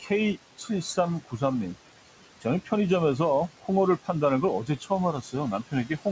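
A speech recording where the room noise, sitting about 14 dB under the voice, sinks between phrases and swells back beneath them. These are noise suppressor artifacts: the suppressor pulls down bands it judges to be steady noise, by about 17 dB, frame by frame. The same processing causes speech cut by the noise suppressor. Parts of the voice turn faint or swallowed at 0.0–1.42 s, 2.41–2.72 s, 3.58–3.70 s, 4.65–4.91 s and 5.22–6.06 s, dropping by about 13–17 dB for brief stretches, because quiet speech was mistaken for noise. Nothing is heard above 8 kHz, which fits the G.722 call path.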